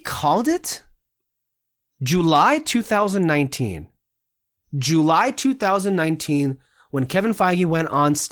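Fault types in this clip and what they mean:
The speech has no technical fault; it comes through Opus voice compression working normally in hybrid mode across the full band, with only the light coding traces that fit a moderate bitrate of around 20 kbps.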